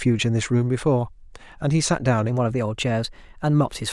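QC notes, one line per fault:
2.29 to 3.93 s, wrong sample rate: from 2.29 s to the end, the speech suddenly turns brighter and quicker, running about 1.09 times faster and sitting roughly 1.5 semitones higher. Pitch and tempo rise by the same ratio because the samples are being clocked out faster than they were captured, with no resampling. The 1.09 ratio fits audio recorded at 22 kHz and played back at 24 kHz.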